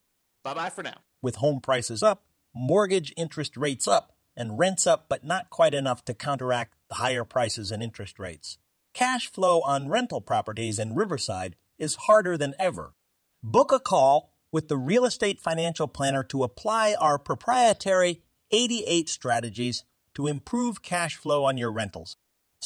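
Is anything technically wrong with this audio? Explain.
No, nothing stood out as technically wrong when listening to this speech recording.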